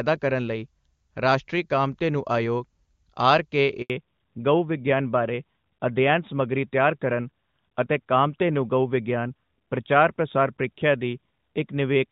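A speech recording carried as a call in clear HD Voice quality, consistent with a high AMR-WB rate, until a handover gap from 3.82 to 3.90 s leaves 80 ms of silence. The sound fades within milliseconds rather than clicking or stuttering, as a network switch does. Immediately afterwards, from 3.90 s to the end, a fallback to narrowband removes everything above 4 kHz. The voice becomes duller and rougher for the rest of the clip instead of briefly muffling and recovering, which points to a lasting codec change to AMR-NB rather than a temporary bandwidth dip.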